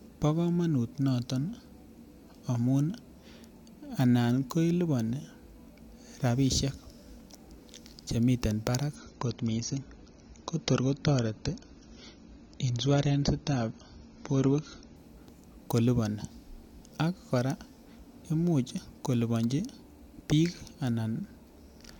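At 8.96 s, just after "chemiten barak", the adaptive stream switches to a lower bitrate, which fits a step down from about 96 kbit/s AAC to about 24 kbit/s as the connection slowed. For six seconds, until 14.96 s, nothing above 7.7 kHz remains, so the speech loses its air, and codec artefacts rise. The change in quality is sudden both ways, with no gap in the audio.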